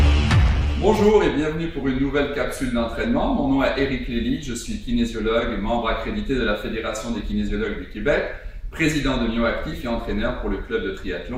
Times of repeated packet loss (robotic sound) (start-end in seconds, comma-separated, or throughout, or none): none